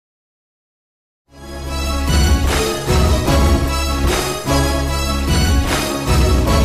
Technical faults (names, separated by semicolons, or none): none